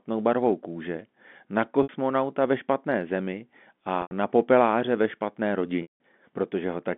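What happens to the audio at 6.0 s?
Packet loss with pitch repetition runs from 5.82 to 6.00 s, so 6.0 s is where the gap closes. About 180 ms of the stream went missing, which fits six lost 30 ms packets. The receiver bridged the hole by replaying the last pitch period, giving a briefly held, buzzy tone that fades over roughly 50 ms and then drops to silence. At 6.0 s the speech returns through a short cross-fade.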